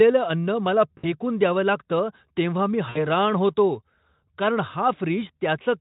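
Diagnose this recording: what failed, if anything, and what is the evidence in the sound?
VoIP packet loss concealed by the speech codec, at the network stage: at 0.97 to 1.06 s, before "द्यावं लागतं तेव्हा मी", and at 2.89 to 3.07 s, after them. About 60 ms was lost each time, which fits three 20 ms frames. The Speex decoder extended its last pitch with falling gain, so a spectrogram shows frozen, fading harmonic stripes.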